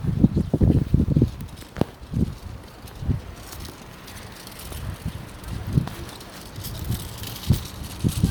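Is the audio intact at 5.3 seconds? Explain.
No. At 5.3 seconds, as across the whole clip, this is low-bitrate audio saved at a high bitrate. The material was likely coded first at a low bitrate, with artefacts that suggest Opus at around 48 kbit/s, and then re-encoded as MP3 at a high rate, consistent with 320 kbit/s. The second pass cannot restore what the first discarded, so the sound there keeps the earlier coding's artefacts. Nothing is present above 20.1 kHz.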